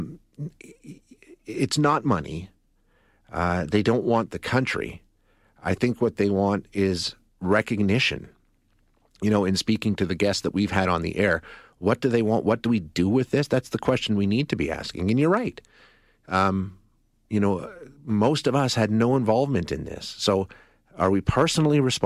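A speech recording with no technical fault anywhere in the signal.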